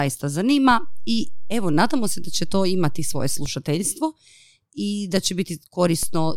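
A speech recording with two DC steps. At 0.71 s the waveform's zero line jumps by about -20 dBFS, holds, and snaps back at 3.46 s. A second offset of about -21 dBFS appears at 6.03 s and lasts to the end. Each jump is heard as a low thump while the speech carries on unchanged, as when an offset input is switched in or a converter recalibrates. On a waveform the whole trace sits displaced from centre between those times. A spectrogram shows a brief vertical low-frequency smear at each transition.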